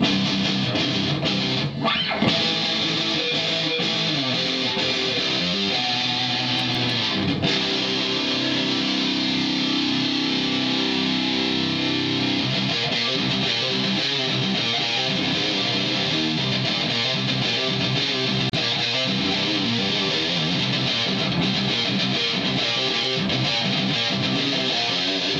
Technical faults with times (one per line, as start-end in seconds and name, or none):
6.59-6.90 CD scratch ticks
18.50-18.53 gap at a join of encoded pieces